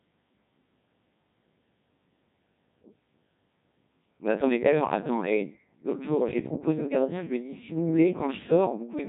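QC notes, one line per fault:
Throughout: Codec 2 vocoder. The speech has the robotic, buzzy character of a very low-rate vocoder, which fits Codec 2 running at 1.6 kbit/s, and the damage is heavy. The decoder isn't rebuilding the original waveform at all. It only gets pitch, voicing, energy and a rough spectral envelope, then resynthesises the voice from sine waves. That's why it sounds artificial and buzzy. Nothing comes through above about 3.8 kHz either, so it's dull and band-limited too.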